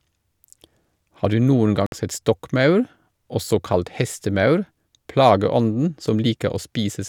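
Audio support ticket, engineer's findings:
Abrupt 58 ms silence in speech at 1.86–1.92 s, resuming as if it had played through. Likely Bluetooth dropout: late packets discarded at the headphones, consistent with roughly four lost packets.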